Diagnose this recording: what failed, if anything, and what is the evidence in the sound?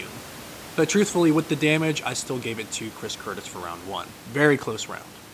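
Nothing in the chain has failed: the speech comes across intact, and the only thing under it is the ordinary background noise of the room, sitting about 24 dB below the voice where it belongs.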